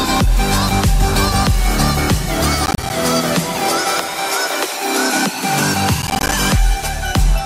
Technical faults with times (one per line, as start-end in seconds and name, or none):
2.66-2.90 processor overload crackle
6.02-6.33 processor overload crackle